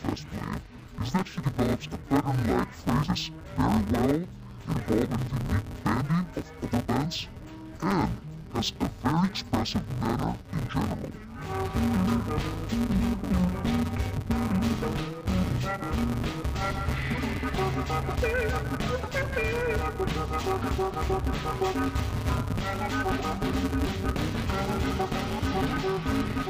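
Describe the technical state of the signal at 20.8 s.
At 20.8 s, as across the whole clip, interleaved audio is being read as planar: each block of alternating left-right samples is split into halves, so every 5.8 ms chunk, which fits a 256-sample block, plays slowed and scrambled. The sound is dull and robotic, buzzing at 172 Hz, without a clear octave drop.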